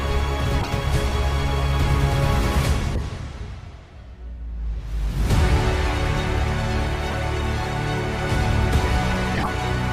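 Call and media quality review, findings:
Corrupt frame decoded: brief chirps and noise bursts at 0.61–0.68 s, 2.95–3.00 s, 7.10–7.18 s and 9.35–9.48 s. Loudest at 0.61 s, about -5 dBFS. Decoder played bit-damaged frames. Misread codes misplace spectral energy, a few frames each.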